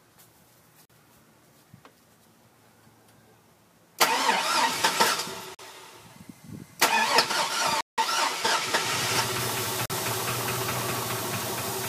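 The audio has hard gaps of digital silence at 0.85, 5.55 and 9.86 s, each about 43 ms, and a longer one from 7.81 to 7.98 s, about 171 ms. These fit missed 2048-sample output buffers, and the longer gap fits four in a row. The abrupt cuts with no fade set them apart from a faded dropout. From 8.41 to 9.41 s, one channel lags by roughly a single sample before the mono sum, causing channel delay (comb filtering). Its first notch sits near 20 kHz, so the result is a top-end dulling rather than obvious hollow phasiness.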